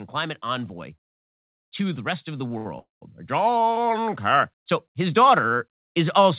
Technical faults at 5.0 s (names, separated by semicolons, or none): automatic gain rising